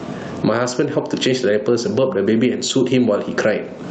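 From start to finish, the speech carries gain pumping: the level is being yanked up and down by roughly 20 dB, so loud and soft parts end up closer in level and the sound is squashed, with the room noise sitting far below the speech. The likely cause is microphone gain set far too high with a fast limiter clamping it. Unlike a noise gate, the background never cuts to silence.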